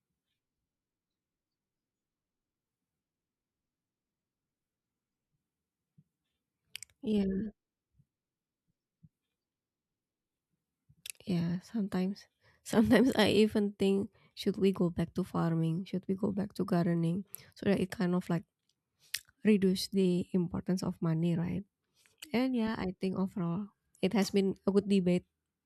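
No faults turn up anywhere in the recording; the speech runs unbroken with no dropouts, glitches or distortion to report.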